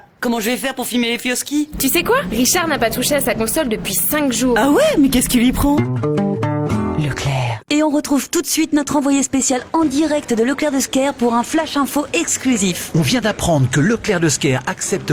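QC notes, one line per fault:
No faults heard; nothing to log.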